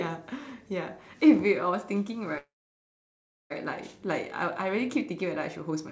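A speech recording carried over a call path whose bandwidth stops at about 8 kHz, consistent with a wideband codec such as G.722. From 2.38 s to 3.52 s there is a call audio freeze: the sound is briefly held over, then goes silent for about 1.02 s before resuming. The likely cause is packets stalling in transit so the jitter buffer ran dry. Nothing is lost; the talk picks up where it stopped, so about 1.12 s of extra delay has been inserted.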